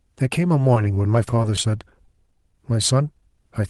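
From 0.74 to 2.39 s there are scattered short gaps: around ten packets went missing or arrived late, none longer than about 15 ms. The receiver filled each hole by stretching the preceding sound, so you hear little ticks and smeared hiccups, roughly a tenth of a second patched in all.

Overlapping that, from 2.07 to 2.70 s, there's a jitter buffer slow-down. The buffer was building reserve by repeating pitch periods, adding 40 ms, so the speech drags to 94% speed at the same pitch, sounding slightly drawn out, all over the Opus call path's 12 kHz bandwidth.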